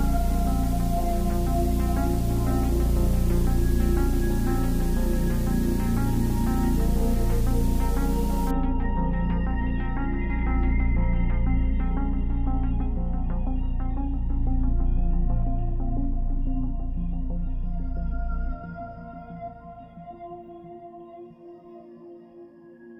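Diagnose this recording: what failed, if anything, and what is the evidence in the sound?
A steady, even hiss sits under the sound from the start to 8.51 s, then stops. It is loud, only around 20 dB below the signal, yet it carries no grit or distortion on quiet passages. That points to low bit depth with dither at the sample-format conversion stage: the audio was reduced to about 6 bits, and dither added before rounding turned the coarse quantisation error into constant white noise rather than signal-dependent distortion.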